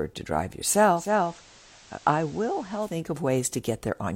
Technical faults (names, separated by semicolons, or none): digital radio blending to analogue